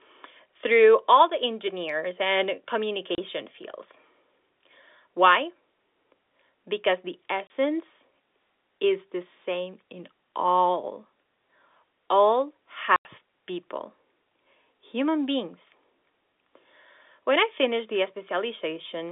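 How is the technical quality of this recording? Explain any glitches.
The recording has three short dropouts in a narrow telephone-band signal, which runs from about 250 Hz to 3.6 kHz under G.711 telephone coding.

Packet loss filled with silence occurs at 3.15–3.18 s, just after "all the engineers and", at 7.47–7.50 s, and at 12.96–13.05 s. The receiver played silence for missing packets, leaving two 30 ms holes and one 90 ms hole. This fits 30 ms packets, with three lost together in the last gap. Each hole has abrupt edges.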